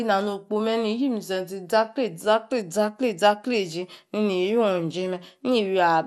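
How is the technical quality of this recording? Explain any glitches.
The recording carries audible codec damage throughout. MP2 compression, present from start to finish: the sound is dull, with a gurgling, granular edge and nothing above 13.7 kHz. This is likely MPEG Layer II coding at a low bitrate, around 80 kbps. Starved of bits across its 32 sub-bands, the encoder drops the top bands entirely and quantises the rest coarsely, so the bands flicker and grain.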